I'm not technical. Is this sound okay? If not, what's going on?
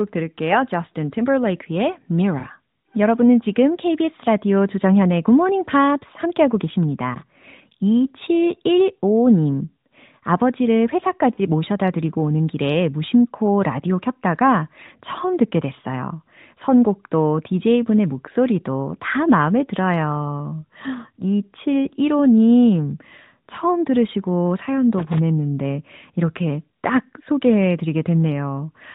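No. This is a mobile phone call, so the narrowband AMR codec keeps the sound thin, with nothing above 4 kHz. Two faults stand out.

Lost AMR speech frames: radio errors corrupted small pieces of the call, and the phone filled each gap by stretching the last good sound. At 2.40 to 2.46 s, just before "여러분은 지금", and at 11.34 to 11.40 s, just before "모셔다 드리고 오는 길에", you hear a 40-millisecond wobble or dip.

Loose connector crackle: a worn or dirty plug or socket briefly lost contact as it moved, chopping the signal on and off. This makes short bursts of scratchy crackling at 7.15 to 7.22 s, and at 24.98 to 25.19 s, right after "처음 들으시고".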